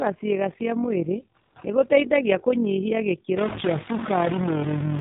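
From start to end the speech carries AMR narrowband mobile codec damage, plainly audible at 7.4 kbps. The sparse pulse-driven vocal-tract model leaves the voice buzzy and synthetic, and a spectrogram shows a hard ceiling with nothing above 4 kHz.

Also throughout runs overlap-add ripple. Frames were rejoined with an overlap whose gain does not sum evenly, so the level swells and dips by about 6 dB at around 40 Hz. It is heard as a rough, robotic tremolo, and the waveform envelope shows a regular scalloping.

From 1.42 to 1.56 s, between "cĩiga cia mwĩrĩ" and "nĩgũteithagia kũnyihia", AMR comfort noise takes over for 140 ms. The link treated the gap as silence and sent no speech frames, so a smooth, steady synthetic hiss replaces the real background. The spectrogram shows this as a flat, featureless band that starts and stops abruptly.

From 3.37 s, just after "cia mwĩrĩ nĩgũteithagia kũnyihia", to the end, distortion sets in, and the quieter stretches fill with noise. 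This is likely a stuck bit, with one data bit pinned so that about half the samples are offset. On the waveform, low-level parts appear jagged instead of quiet.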